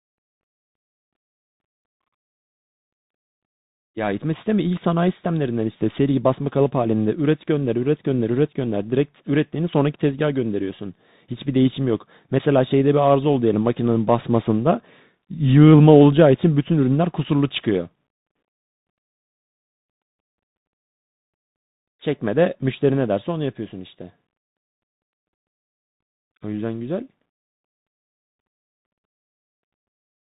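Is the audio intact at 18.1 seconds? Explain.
No. At 18.1 s the speech is passing through a Bluetooth CVSD headset codec, and this damage runs through the whole clip. CVSD codes each sample as a single bit saying up or down, and the step size adapts. The sound points to a 64 kbps stream. Nothing above 4 kHz survives, so the speech is narrowband. Loud high sounds outrun the step and distort. S sounds turn scratchy. A granular hiss sits underneath, and the damage is plainly audible.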